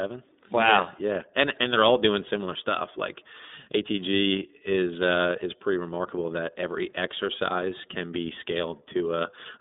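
Throughout, the speech carries iLBC codec damage: nothing above 3.8 kHz, a 200 Hz to 3.7 kHz line band, and independently coded frames giving a plainly rough, synthetic grain that a simple band-limit would not add.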